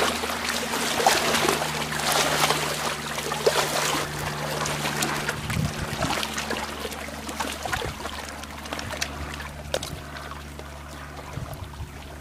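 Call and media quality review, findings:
Damaged data in a compressed stream: short glitch at 2.00, 4.05 and 9.77 s. Probable component: decoder input. Corrupted frames misread, sync lost, resynced at next header. Spectrogram: thin broadband vertical streak; waveform: abrupt discontinuity at each point.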